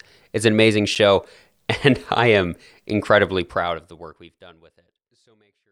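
At 0.95 s, right after "an amazing", the speech drops into a block of digital silence lasting 8 ms. A chunk of samples was zeroed, most likely because the output buffer was not filled in time. The signal jumps to zero and back with no ramp, so the gap is heard as a single sharp tick rather than a hole. Its abrupt edges set it apart from the gentle fade-out starting around three and a half seconds, which has no click.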